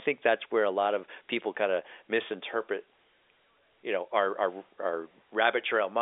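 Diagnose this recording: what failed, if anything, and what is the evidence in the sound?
Nothing failed in this recording.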